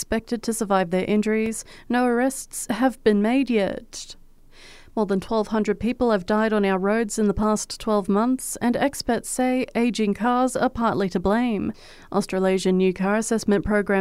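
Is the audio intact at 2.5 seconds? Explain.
Yes, at 2.5 seconds the speech plays through cleanly, with no audible fault at that moment.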